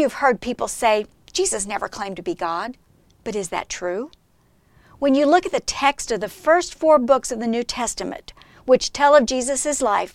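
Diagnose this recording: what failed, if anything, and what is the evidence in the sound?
Nothing failed; no fault can be heard anywhere.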